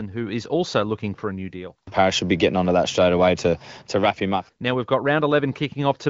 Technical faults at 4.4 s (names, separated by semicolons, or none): none